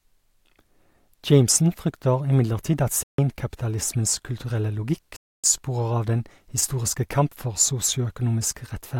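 Bluetooth stalls at 3.03 to 3.19 s, just after "imidlertid at", and 5.16 to 5.44 s cut the speech to silence for 153 ms and 274 ms, then resume. Interference likely delayed packets until the headphones' buffer emptied, pausing playback until resent data arrived.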